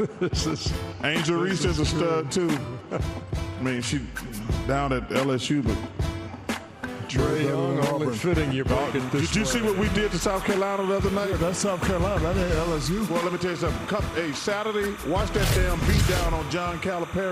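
From 8.76 s to the end, a chirping warble sits roughly 15 dB under the sound: timecode bleed, 29.97 fps code near 1 and 2 kHz leaking in.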